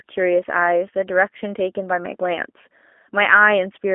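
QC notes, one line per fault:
Throughout, G.729 codec: the speech has the narrow, slightly rough and synthetic quality of a low-rate CELP voice codec, which fits an 8 kbit/s G.729-type coder. The codec rebuilds each frame from a vocal tract filter, a pitch predictor and a few pulses, so fine detail is lost. On a spectrogram, energy stops at a hard ceiling near 3.6 kHz, the low end thins below about 250 Hz, and harmonics look smeared rather than crisp.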